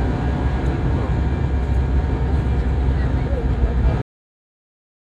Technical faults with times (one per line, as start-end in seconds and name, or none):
4.02-5.11 cut-off end